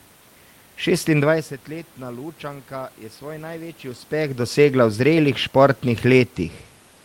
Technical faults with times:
none

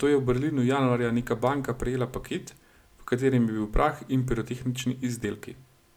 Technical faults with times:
none

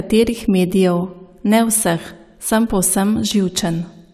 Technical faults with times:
none

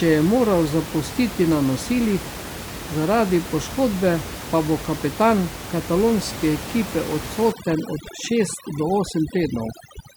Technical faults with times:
7.52-10.16 overdone noise removal

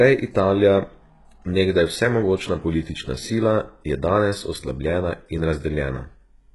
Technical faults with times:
0.00-6.54 HE-AAC compression

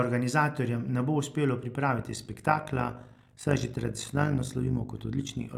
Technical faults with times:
1.98-5.57 overlap-add ripple

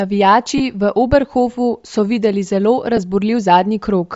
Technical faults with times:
0.00-4.15 Bluetooth LC3 compression
0.58-0.60 lost LE Audio frames
2.97-2.99 lost LE Audio frames

